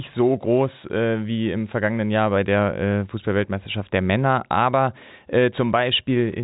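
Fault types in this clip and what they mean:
No faults can be heard in this speech.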